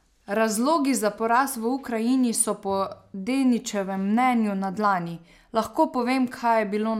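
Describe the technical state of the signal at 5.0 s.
At 5.0 s the speech signal is intact, with no audible dropout, clipping, distortion or other fault at that moment.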